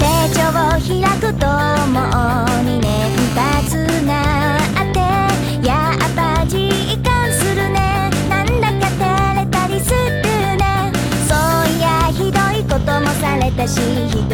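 From 2.84 to 3.67 s a GSM phone buzz appears: a harsh, raspy 217 Hz buzz with many harmonics, about 14 dB below the signal, from rectified 2G call bursts.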